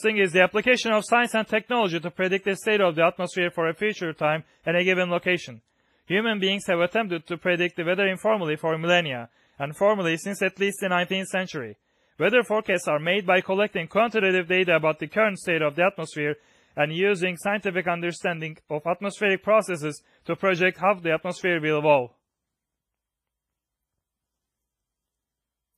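From start to finish the speech carries heavy codec damage, likely WMA compression at a low bitrate on the order of 24 kbps. A transform codec with long blocks smears its quantisation error over tens of milliseconds, so consonants ring and trail into washy hiss that rises and falls with the voice, while weak spectral detail drops out and nothing survives above 15.5 kHz. Unlike steady background noise, this hiss tracks the signal.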